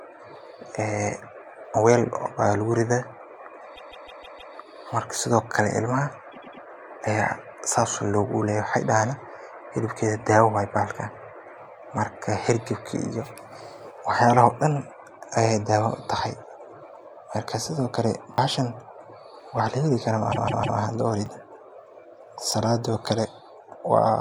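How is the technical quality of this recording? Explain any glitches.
The clip has two kinds of glitch: three stretches of repeated frames and three brief repeated-buffer hiccups.

Repeated frames at 3.75–4.53 s, 6.31–6.62 s and 20.31–20.78 s: a run of compressed frames got resent, so the decoder replays a chunk of about 157 ms (about 105 ms in the middle case) three to five extra times. That's a stutter that stretches the audio by about 0.78, 0.31 and 0.47 s.

Repeated buffer at 18.34–18.38 s, 21.26 s and 22.52 s: playback ran dry and the device replayed its last tiny block, which fits a 20 ms buffer. With blocks that small, these come across as quick clicks or buzzy ticks rather than a clear stutter.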